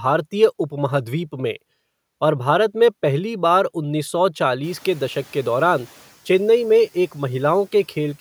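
At 4.63 s, just after the room noise in this speech jumps by about 19 dB at roughly 4.5 s, the noise suppressor is caught up short: its noise estimate lags, so the noise passes with little reduction, then sinks over 1.43 s until 6.06 s. Unlike gate pumping, it fades smoothly once rather than breathing with the speech.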